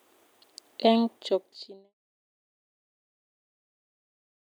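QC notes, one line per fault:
No faults to note.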